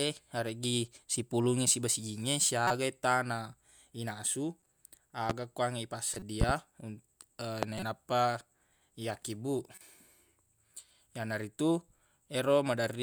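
Right after "siba sijingnge", a corrupt frame decoded at 2.67–2.75 s gives a loud chirp, with a faint blip at 4.60–4.66 s. Damaged compressed frames were played anyway, misplacing spectral energy across a few frames each. A loud pop at 5.30–5.33 s sits well above the speech and is likely an electrical transient such as a switch or static discharge. More corrupt frame chirps follow at 6.13–6.23 s. A double pop lands at 6.41–6.53 s and a single pop at 7.63–7.66 s. Further corrupt frame chirps come at 7.78–7.83 s and, quieter, at 9.71–9.82 s.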